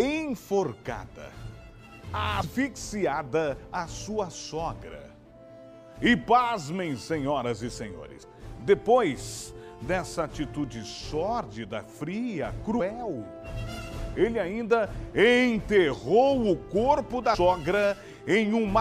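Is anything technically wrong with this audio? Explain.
Yes. At 8.22 s, 12.79 s and 17.34 s the audio abruptly jumps forward, with a short smeared blip at each join instead of a hard click. Roughly 150 ms of material vanishes at the first two points and around 200 ms at the third. These are compressed frames skipped: whole coded frames never reach the output. The gaps correspond to about five, five and seven frames, which fits a 26.1 ms frame length, and overlapping neighbouring frames soften each seam into a blur.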